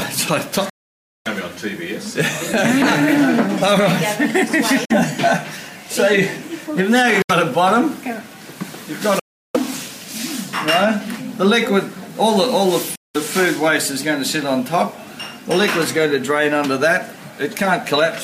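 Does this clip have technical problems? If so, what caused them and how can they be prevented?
Yes. The sound cuts abruptly to silence five times and then resumes further along, as if it kept playing underneath: 0.69 to 1.27 s (about 0.56 s), 4.85 to 4.92 s, 7.22 to 7.31 s, 9.19 to 9.56 s and 12.95 to 13.16 s. That's likely a Bluetooth dropout, where packets reach the headphones too late and get thrown away. Keeping the source close with a clear line of sight and less 2.4 GHz congestion nearby should prevent it.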